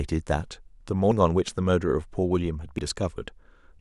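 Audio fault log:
1.12 s and 2.79 s: dropped buffers (overrun). At each point the speech jumps straight ahead with no gap, losing roughly a tenth of a second. That's most likely the capture side missing a buffer before the hardware overwrote it.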